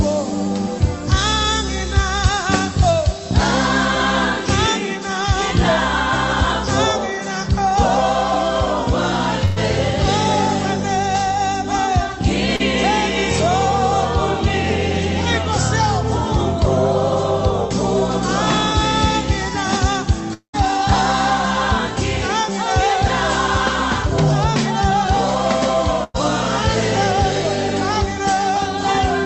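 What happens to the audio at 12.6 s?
A short concealed packet loss occurs from 12.56 to 12.61 s: about 40 ms of audio never arrived in time, and the receiver patched 32 ms of the gap by extending the preceding sound before blending back, heard as a brief smear or wobble.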